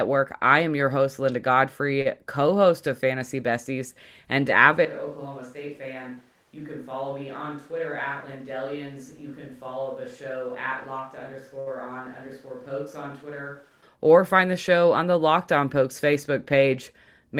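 At 2.01 to 2.07 s, just before "co host of", there is a short stall from a late packet. The receiver held the last sound for about 37 ms until the delayed packet arrived, so a sound drags slightly. On a spectrogram this looks like a brief run of frozen, smeared harmonics.

From 4.85 s the sound abruptly changes to a distant microphone, likely because the close microphone dropped out. It becomes hollow and roomy, with thinner bass, about 10 dB lower level and audible room noise roughly 30 dB under the speech. The waveform shrinks at the cut, and the spectrogram shows weaker low frequencies and a raised noise floor. Within this stretch, at 11.60 to 11.68 s, another late-packet stall holds the sound for about 66 ms. The close microphone returns suddenly at 13.82 s, just before "or find the".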